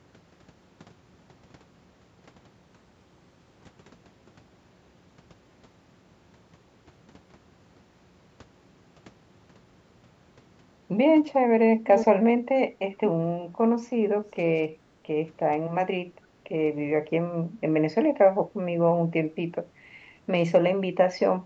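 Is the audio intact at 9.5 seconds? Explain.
Yes, the speech at 9.5 s is intact, with nothing heard there beyond the normal call microphone processing.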